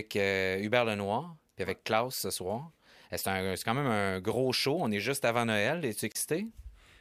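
At 6.12 s the speech drops to silence for about 31 ms, resuming at 6.15 s where it left off. This gap is likely a Bluetooth stall: interference delayed packets, the headphone buffer emptied, and playback paused until retransmitted packets arrived.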